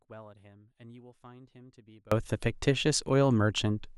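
The wanted signal was likely lost somewhere upstream while the rest of the chain stayed live, so the clip opens in an audio dropout to a faint residue already under way. From the start until 2.12 s, the speech is missing and only a faint leak of sound remains, roughly 30 dB below its normal level. At 2.12 s the full signal cuts back in abruptly, with none of the gradual rise of a fade.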